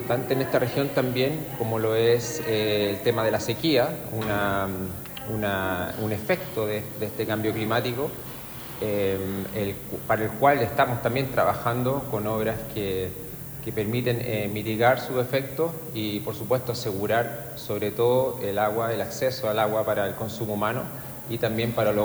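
From start to finish, the signal is carried at low bit depth with noise shaping, consistent with about 7 bits, and the rounding error is pushed upward in frequency. The result is a steady, thin hiss, roughly 15 dB below the sound, rising sharply toward the top of the band.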